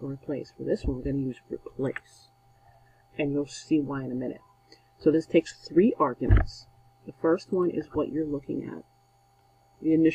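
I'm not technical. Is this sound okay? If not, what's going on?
Yes, nothing here points to a technical fault, so there's nothing to fix.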